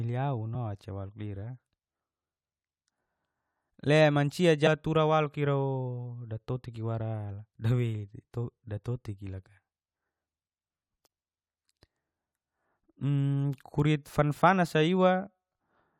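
A speech recording with damaged data in the compressed stream: a short glitch at 0.54 s, just before "oca walu lira", and another at 4.66–4.68 s, right before "tura waluk", where the decoder lost sync on corrupted frames.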